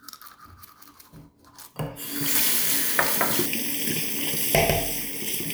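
Channel delay (comb filtering) begins at 3.46 s and lasts to the end at 5.54 s. One channel lags the other by a fraction of a millisecond, and when the two are combined into mono, the parts they share cancel at regularly spaced frequencies. The lowest notch falls somewhere near 1.5 kHz, with further notches stacked higher up. The sound turns hollow and phasey, its upper midrange thinned by those fixed gaps.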